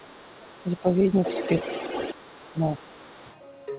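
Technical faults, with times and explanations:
0.0 to 0.8 s and 1.08 to 3.36 s, other side's voice leaking through: a second voice sits under the speech. At first it is faint, about 30 dB down. Later it is only about 10 dB below. The likely cause is loudspeaker echo that the echo canceller failed to remove from the microphone signal.
0.44 to 1.19 s and 2.14 to 2.94 s, speech suppressed in double talk: the talker's level dips and breaks up while the other voice is present. The first drop reaches about 10 dB over roughly half a second, and the second is deeper at about 20 dB over roughly 0.7 s. This is likely the echo canceller attenuating both voices during overlap. The call audio is band-limited, with nothing above 4 kHz.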